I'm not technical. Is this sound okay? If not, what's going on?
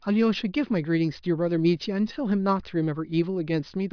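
Yes, this sound is okay, and nothing is going on that needs fixing.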